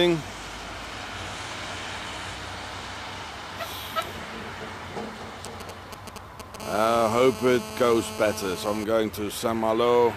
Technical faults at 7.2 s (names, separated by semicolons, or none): GSM phone buzz